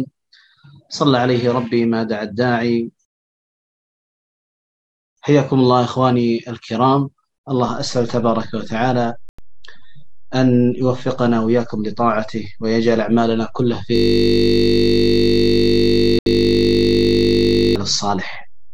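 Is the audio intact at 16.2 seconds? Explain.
No. Three faults overlap at 16.2 seconds.

A DC step has been in place since 7.68 s. At that moment the waveform's zero line jumped to a new resting level, and that offset holds to the end of the clip. The jump itself came through as a low thump. Since then the offset sits silently under the sound. It does not change the sound, but the whole signal now rides off-centre.

A system hang loop runs from 13.96 s to 17.76 s. The host stopped feeding new audio, and the output hardware kept replaying its ring buffer. A single 20 ms slice repeats end to end, about 190 times. At a loop rate of 50 Hz, this is heard as a steady, pitched buzz instead of the sound moving forward. The short loop length fits a small output buffer.

A Bluetooth stall falls inside that buzz, from 16.19 s to 16.26 s. The output drops to silence for 73 ms, then resumes. The likely cause is that interference delayed packets on the wireless link, so the headphones' buffer ran empty. 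Playback waited for the late data before continuing.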